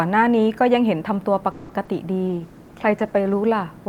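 At 1.51 s the speech hangs: for about 180 ms, up to 1.71 s, the last sound keeps going as a fading buzz that never quite reaches silence, and then the speech picks up right where it left off. That's a call audio freeze, and the likely cause is packets stalling in transit long enough that the jitter buffer drained and the receiver had to stretch what it already had. Nothing is actually lost. The whole thing just arrives 180 ms later than it should.

Shortly after, between 1.85 and 1.89 s, there's a short concealed packet loss. About 20 ms of audio never made it to the decoder in time, so the receiver papered over the hole by carrying the previous sound forward and then blending back into the real signal. You hear it as a quick smear in the speech rather than a clean dropout, and that 20 ms of the original is simply gone.

From 2.28 s to 3.43 s comes a call bitrate drop. The encoder went from 64 kbps down to 15 kbps, which happens when the connection's bandwidth estimate falls and the sender is told to economise. 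It sat at that low rate for about 1.1 seconds. Through that stretch the speech turns rough and watery, a bit dulled, because the coder has far fewer bits to describe it, and it cleans up again once the rate climbs back.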